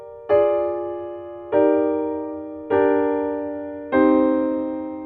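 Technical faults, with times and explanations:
No technical faults can be heard anywhere in the recording, and the signal has no breaks or disturbances.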